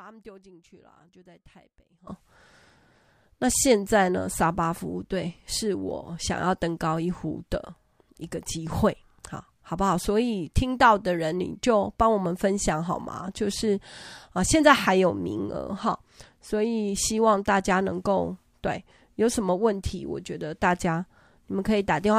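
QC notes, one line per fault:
0.00–2.07 s, audio dropout to a faint residue. The speech is already missing when the clip begins. For just over two seconds only a faint trace of it remains, roughly 25 dB down. At 2.07 s the speech returns abruptly at full level, with no fade-in. A pause would go silent, and a fade would ramp. This is a sudden step, so the likely cause is a lost feed upstream while the path after the break stayed live.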